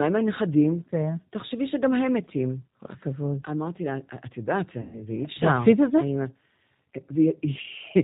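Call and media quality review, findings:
Rough, synthetic speech throughout, nothing above 4 kHz. G.729 codec at 8 kbit/s: sparse-pulse excitation through a vocal tract filter, audibly degrading the speech.

4.81–4.98 s: fading smear, weak onset after. VoIP packet loss concealed by the speech codec; about 120 ms missing, decoder extrapolating the last pitch and filter at falling gain.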